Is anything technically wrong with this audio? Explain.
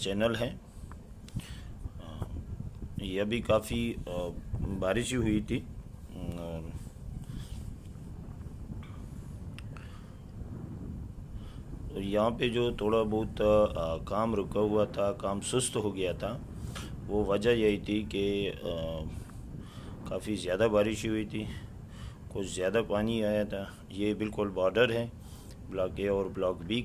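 No, nothing is technically wrong with this audio.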